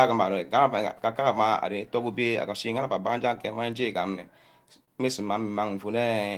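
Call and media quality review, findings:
Clock drift between sender and receiver, throughout: sender clock runs about 1% slow against receiver. Jitter buffer keeps draining, so the receiver must pad audio to hold sync. Audible as faint, uneven timing wobble across the speech.

Repeated timing corrections, 0.46–4.79 s: playback effectively at 99% speed, with small stretches inserted at irregular spacing, around 50 ms added in total. All edits in the lengthening direction. Heard as slight hiccups and unsteady pacing, receiver-side sync logic.

Short stall from a late packet, 4.85–4.90 s: packet missed its slot and the jitter buffer ran empty. Receiver held the last sound for 28 ms until arrival, then resumed in place. No audio lost. Brief held sound with a slight buzz or dip.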